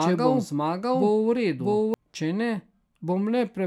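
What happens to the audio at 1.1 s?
At 1.1 s a doubled audio track is playing, already under way at the start and ending abruptly at 1.94 s. A full-band copy of the speech, about as loud as the original, trails it by roughly 0.7 s, likely from a second, slower capture path. On a spectrogram the harmonic patterns appear twice, offset in time.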